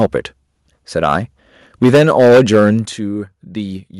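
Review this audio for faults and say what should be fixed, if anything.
Microphone overload shows up three times in this speech: briefly at 0.01–0.06 s and 1.09–1.14 s, where peaks overshoot by about 2 dB and about 1 dB, then heavily from 1.82 to 2.70 s, by about 10 dB, with a sizeable share of samples flattened. The likely cause is input gain set too high, so the converter's ceiling shaves the tops off the loudest syllables and leaves a harsh crackle. On the waveform the peaks appear as flat plateaus. On a spectrogram, vertical smears of broadband energy appear during the long stretch. Lowering the input gain so loud peaks stay several decibels below full scale would prevent this.

Microphone volume stepped down occurs twice, as sudden drops in the level of both the speech and the background: about 2 dB at 1.84 s, just as the long overload begins, and about 8 dB at 2.85 s, shortly after it ends. 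The likely cause is the call software's automatic gain control reacting to the clipping by cutting the device's input volume in single steps. The waveform envelope drops abruptly at each point, and on a spectrogram the whole band dims at once. Disabling automatic microphone gain adjustment and setting a fixed, sensible input level would prevent these jumps.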